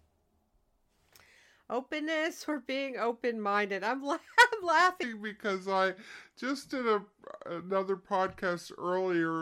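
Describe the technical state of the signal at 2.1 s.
At 2.1 s the speech signal is intact, with no technical fault at that moment.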